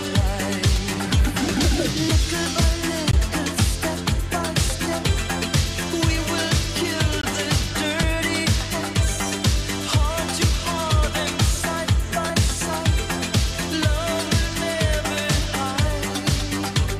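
At 3.11 s and again at 7.21 s the sound drops out for about 20 ms, a short hole. These are blocks of digital silence: a run of samples was replaced by zeros, so the waveform falls straight to nothing and jumps straight back with no fade. The 20 ms length is long enough to register as a brief gap rather than a single tick.

At 8.03 s and 12.30 s there is a jump in the sound but no silence. Roughly 15 ms goes missing at the first point and only a few milliseconds at the second, with the surrounding audio butted together directly. The likely cause is a dropped buffer (overrun): the program failed to collect its samples before the hardware overwrote them, so that stretch was lost and the two sides were joined.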